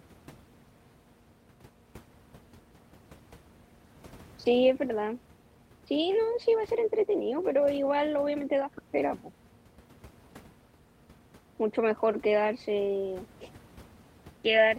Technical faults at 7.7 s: none

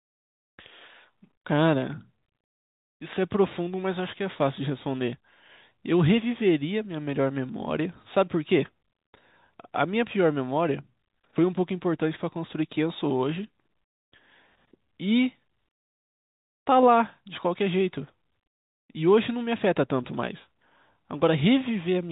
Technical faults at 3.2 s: none

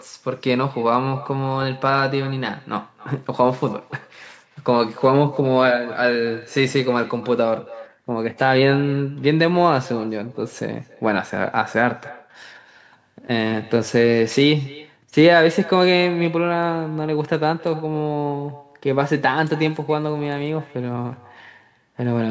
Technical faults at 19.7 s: echo with no canceller

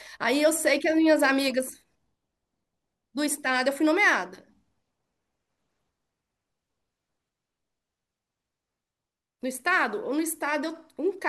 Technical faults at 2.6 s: none

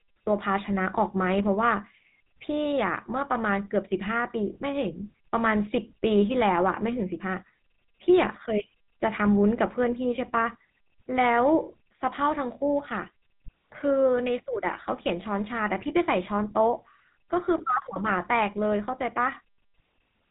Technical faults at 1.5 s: GSM full-rate codec

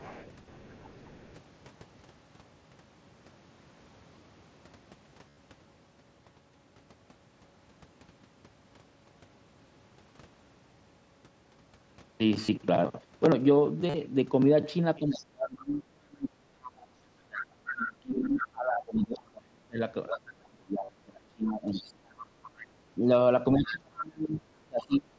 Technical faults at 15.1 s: other side's voice leaking through; speech suppressed in double talk

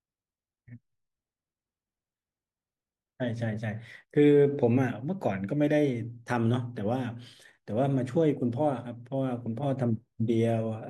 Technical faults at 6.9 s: none

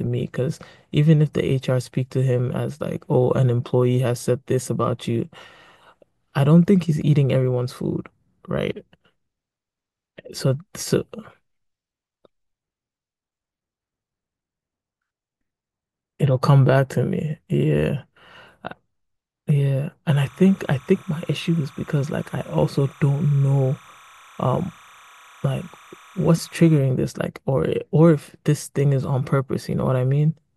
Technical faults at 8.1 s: none

